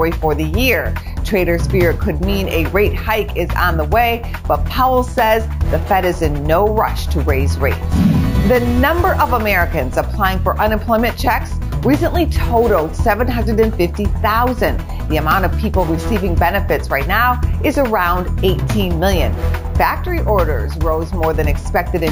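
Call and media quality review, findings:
Imaging from sample-and-hold upsampling, whole clip. Metallic fizz at 8–16 kHz, about 22 dB below signal, rising and falling with level. Fits 16 kHz audio raised to 48 kHz with no smoothing filter. Unlike aliasing, the fizz sits above the original band.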